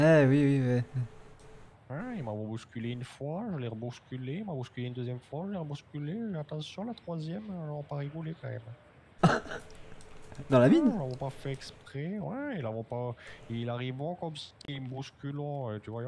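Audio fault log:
Nothing to log here; the audio runs along without a single problem worth writing down.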